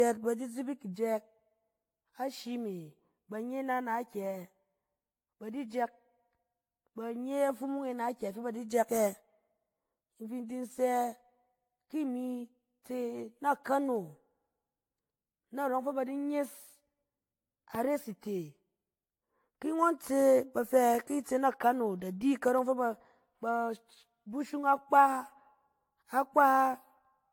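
Right from the start the speech has that swirly, hollow, smeared quality, with softened attacks and nothing above 18.6 kHz. That's most likely generation loss: the audio went through an AAC-type codec several times, maybe around seven passes, with a bitrate fitting roughly 96 kbit/s, and each pass added fresh quantisation damage.

Then at 17.75 to 17.77 s there's a single sharp loud pop, about 10 dB above the speech, which carries on underneath it. It's likely a voltage spike from a plug, a switch, static or a driver glitch that got into the signal chain.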